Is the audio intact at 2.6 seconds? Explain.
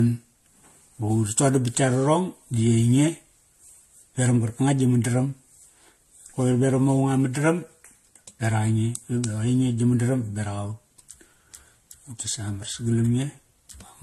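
No. At 2.6 seconds, as throughout, the speech shows transcoding between lossy codecs, likely a chain of successive encodes ending in Vorbis. Nothing sounds above 12.5 kHz, and artefacts from different coders overlap. A single low-bitrate encode wouldn't layer these mixed textures.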